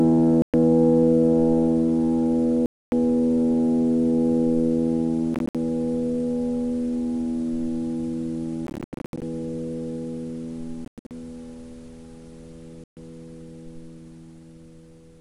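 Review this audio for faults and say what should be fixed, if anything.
Six short holes cut through the audio at 0.42 to 0.54 s, 2.66 to 2.92 s, 5.34 to 5.55 s, 8.67 to 9.22 s, 10.85 to 11.11 s and 12.84 to 12.97 s. The third, fourth and fifth are broken into several gaps, up to 0.1 s each. The cause is likely Bluetooth dropout: late packets were discarded and the sound resumed where it would have been. On a waveform these show as flat lines. A spectrogram shows blank vertical bands with hard edges. Keeping the headphones close and clear of 2.4 GHz interference, or using a wired connection, would prevent this.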